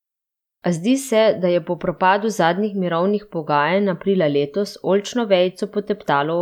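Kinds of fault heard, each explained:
No faults detected anywhere in the speech recording.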